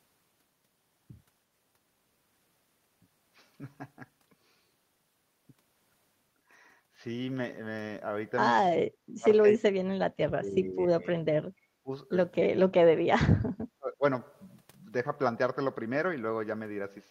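The speech dips at 8.68–10.15, 10.33–11.08, 11.67–11.9, 12.42–12.48 and 13.02–14.03 s. The first and last spans fall by about 40 dB. The others dip less. The likely cause is speech suppressed in double talk. The echo canceller turned the talker down while the far side spoke.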